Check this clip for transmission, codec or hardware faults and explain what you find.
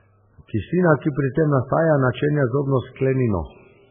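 One codec fault runs through the whole speech clip. Heavy MP3 compression is the likely cause. Nothing is heard above 3.5 kHz, so the treble is cut off flat. The damage points to a very low bitrate, around 8 kbps. At that rate the encoder has too few bits to go round. It drops the top band and zeroes weak frequency lines. These flicker on and off between frames. The speech sounds dull, watery and swirly, with smeared attacks.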